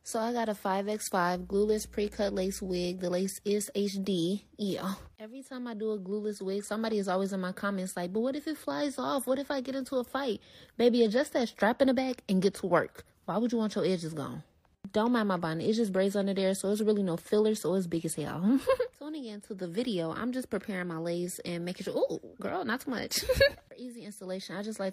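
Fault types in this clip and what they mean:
Mains hum: a steady low tone at 60 Hz, picked up from the power line through a ground loop or a nearby transformer. It runs from 1.36 s to 2.86 s, a constant drone sitting roughly 20 dB below the sound. Unlike rumble from wind or handling, which wanders and spreads across low frequencies, hum holds one fixed pitch locked to the mains frequency and does not change in level while it lasts.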